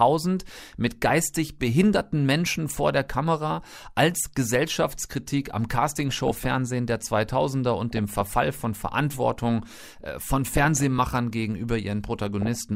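Five bursts of DAB burbling hit this speech: 1.06 to 1.28 s, 6.09 to 6.46 s, 7.91 to 8.33 s, 10.47 to 11.11 s (the longest), and 12.17 to 12.55 s. Weak reception lets bit errors, at roughly 0.15 to 0.3 percent, slip past error correction into the MP2 data. Corrupted samples put short noise blips into single sub-bands, and corrupted scale factors make sub-bands jump in level for up to a frame, giving watery, bubbling blips over the voice.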